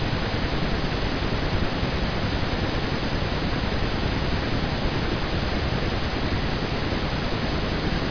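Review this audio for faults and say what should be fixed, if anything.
Nothing to fix: no faults are audible anywhere in the clip.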